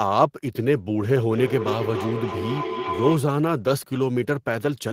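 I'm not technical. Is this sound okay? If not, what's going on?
No. From 1.31 to 3.32 s there is feedback howl, a howling tone around 1 kHz. It happens when two devices in the same room are on the same call: one device's microphone picks up the other's loudspeaker, and the sound circles between them, getting louder each time. Each trip around the loop takes roughly a third of a second. Unlike an ordinary echo, which fades, this grows into a single ringing tone until the loop is broken.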